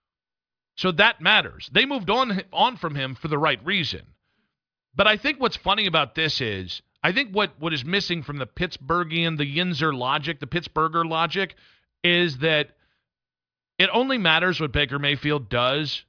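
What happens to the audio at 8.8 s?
At 8.8 s the speech carries on intact, with no dropout, click, distortion or other break in the sound.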